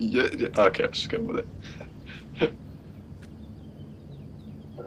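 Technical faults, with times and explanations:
0.54–2.63 s, call bitrate drop: the sound goes rough and dull for about two seconds, which fits the encoder falling from around 32 to 16 kbps and coding more coarsely.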